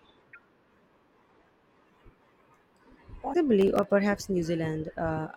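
At 0.30 to 0.36 s and again at 3.30 to 3.35 s, the speech breaks into a short glitch. This is damaged data in a compressed stream. Corrupt bytes make the decoder lose sync and hunt for the next frame header.

From 3.61 to 3.91 s comes processor overload crackle. The processor missed a handful of tiny buffer deadlines, each under a millisecond long. Each miss replayed old audio with hard edges. The result is a gritty crackle riding on the speech.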